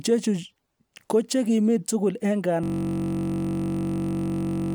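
Right after "kochekimi tugul en", at about 2.64 s, the speech freezes into a system hang loop that runs to the end of the clip. The machine or its driver stalled while the sound hardware kept replaying one 21.33 ms chunk of its ring buffer, which fits a 1024-sample buffer. Repeated around a hundred times at 46.9 Hz, that tiny slice stops sounding like speech and becomes a steady, flat buzz.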